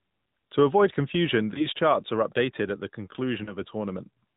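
The speech is carried through the AMR narrowband mobile codec throughout. Nothing above 4 kHz survives, and the voice has a plainly buzzy, synthetic texture that fits a mid-rate AMR-NB mode around 10 kbps. That texture is what separates it from simple low-pass filtering, which would only dull the sound. Lost AMR speech frames cause two brief disturbances. The first runs from 1.54 to 1.67 s, just after "avoid confusion" and before "charts are updated at". The second runs from 3.44 to 3.56 s, just after "are updated at the". Each sounds like a single 20 ms frame lost to radio errors. The decoder stretches the previous pitch and vocal tract settings at falling gain, so there is a short warbly dip before the voice returns rough for a moment. A hard packet-loss gap or click would instead cut abruptly to silence.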